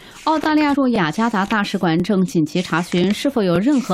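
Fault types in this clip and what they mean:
Overlapping chunks: Each half-second block starts 20 ms before the previous one ends, so that 20 ms plays twice at every join, heard as a regular stutter from 0.44 s onward. On a waveform each seam shows a repeated cycle pattern; a spectrogram shows thin vertical lines evenly spaced.
Compressed frames skipped: At 0.73 s, about three 21.3 ms codec frames never play, so the sound jumps ahead by roughly 70 ms. A spectrogram shows a vertical seam where content shifts abruptly.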